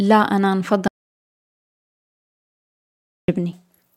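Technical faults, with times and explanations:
0.88 to 3.28 s, audio dropout to silence: the speech cuts off mid-flow and about 2.4 s of silence follows, with no room tone at all, before it picks up again. That points to the input likely being lost while the recorder kept writing silence.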